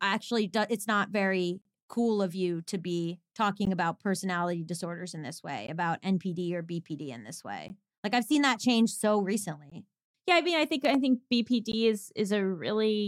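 Gaps at a join of encoded pieces break the speech every 2 s. The first runs from 1.62 to 1.65 s, about 36 ms. Brief 16 ms dropouts follow at 3.65 s, at 5.67 s after "disorders in this way", at 7.68 s after "in this", at 9.70 s after "seen that change so", and at 11.72 s. Each piece was encoded separately and joined untrimmed. The encoder's start delay and end padding leave silence at every join. The speech then resumes where it stopped.

Between 10.85 and 10.97 s, a loud pop lands twice, well above the speech. It likely comes from a sudden voltage spike, such as a plug, switch or static. The speech continues underneath.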